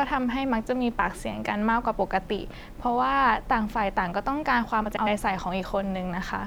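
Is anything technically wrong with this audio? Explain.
Yes. From 4.85 to 5.07 s, frames out of order: two adjacent blocks of about 104.5 ms play swapped, giving a garbled flutter, without losing time.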